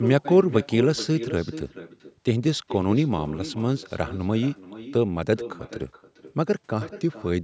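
Echo with no canceller runs throughout: the far end's loudspeaker feeds its microphone, returning each phrase around 0.4 s later, about 13 dB quieter and thin.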